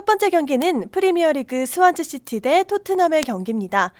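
At 3.23 s there's a bit error spike: a flipped bit knocks three samples off by a power of two, so you hear one sharp, broadband tick unrelated to the speech.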